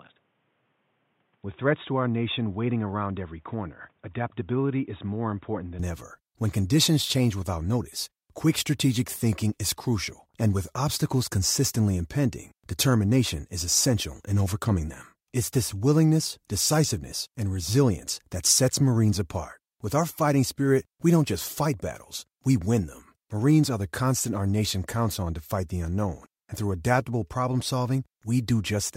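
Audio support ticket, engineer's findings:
0.00–5.79 s: dull, boxy sound, nothing above 3.8 kHz, level about 5 dB lower, different hiss about 40 dB under the signal. Full bandwidth returns at 5.79 s with no gap. Likely cause: input switched to a poorer device, a narrowband capture path with its own tone, gain and noise floor.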